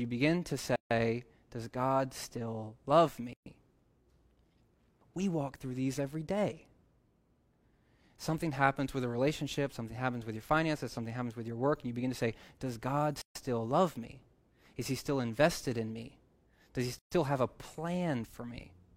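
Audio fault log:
0.76–0.91 s, 3.33–3.46 s, 13.22–13.35 s, 16.99–17.12 s: gaps at joins of encoded pieces. The speech breaks off in gaps of 150, 130, 138 and 128 ms, right after "begin to", right after "still love", at 13.22 s, and just before "have a". Each piece was encoded on its own and butted together untrimmed, so encoder start delay and last-frame padding sit in the seam. The codec smears the edges, and the speech picks up exactly where it stopped.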